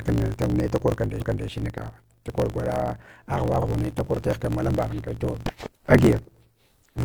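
Block size mismatch (truncated) runs through the whole speech clip: each written block, which fits a 1024-sample buffer, loses its tail before the next stage reads it. The result is a steady 50 Hz buzz, with speech running 1.16 times fast at near-normal pitch.

Repeated frames occur at 1.16 to 1.44 s, just after "da korkan", where about 0.28 s of compressed audio plays twice as a stutter, and again at 3.58 to 3.64 s, where a 46 ms stretch repeats. Each repeat adds its own length to the clip.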